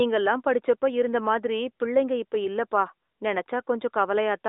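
No technical faults can be heard in this speech. It carries the sound of an AMR narrowband mobile codec at 12.2 kbps: a telephone band of roughly 300 Hz to 3.7 kHz, nothing above about 3.8 kHz, and only light coding colour on the voice.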